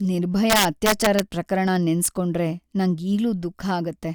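Speech with integer overflow from 0.50 to 1.20 s, where gain about 3 dB too high wraps loud peaks to the opposite sign, and again at 2.06 s. The waveform shows sudden full-range sign flips, and the spectrogram shows broadband vertical streaks, heard as sharp cracks.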